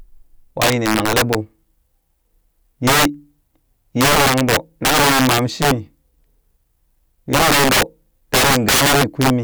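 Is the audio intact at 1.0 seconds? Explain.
No. From 0.62 to 1.35 s, loud peaks snap into violent cracks: integer overflow, where samples pushed about 5 dB past the limit wrap to the opposite sign.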